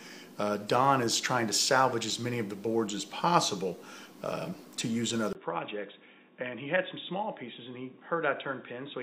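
At 5.33 s the recording likely switched to a poorer input device. After a 20 ms gap, the audio turns dull, cuts off above 3.8 kHz, drops about 10 dB, and picks up faint new background noise.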